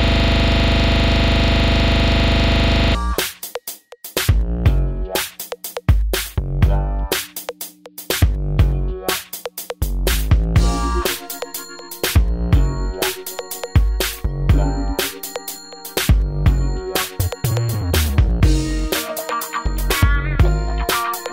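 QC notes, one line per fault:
0.00–2.95 s system hang loop, already under way at the start: a frozen system left the hardware replaying one 40 ms buffer, giving a rattling 25 Hz buzz.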